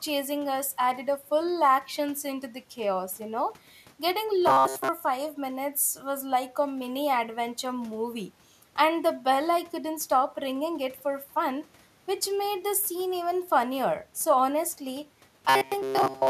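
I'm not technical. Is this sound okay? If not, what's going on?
No. New audio likely arrived too late, so the software kept replaying its last tiny slice, about 7.5 ms long. This robotic sound from repeated short buffers, from 4.47 to 4.89 s and 15.49 to 16.29 s, turns speech into a rigid metallic buzz at 133 Hz.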